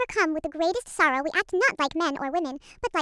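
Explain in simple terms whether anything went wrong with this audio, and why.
Yes, there's a wrong sample rate problem running through the whole clip. The speech plays one and a half times too fast and about seven semitones too high, so voices sound squeaky and rushed. That fits audio recorded at 16 kHz being played back as if it were 24 kHz.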